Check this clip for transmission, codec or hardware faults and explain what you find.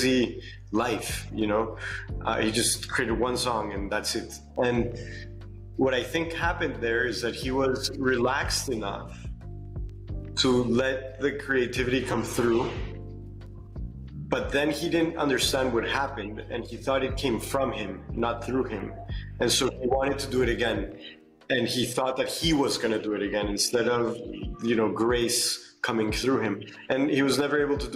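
One transmission fault appears: a call bitrate drop from 12.12 s to 20.63 s. The encoder's budget fell, with the sound pointing to a fall from about 96 to 23 kbps, held lowest for about 3.9 s. Coarser coding makes the audio rough and muffled as the highs disappear. Unlike packet loss, nothing drops out; the degradation is continuous, then recovers.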